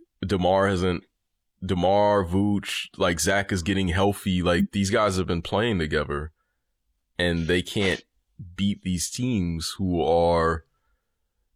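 At 4.59 to 4.67 s, between "is getting healthy" and "these guys have been", a corrupt frame decoded produces a brief chirp, squeak, blip or burst of noise peaking around -15 dBFS. Damaged bits across roughly two compressed frames were decoded regardless, misplacing spectral energy for those frames.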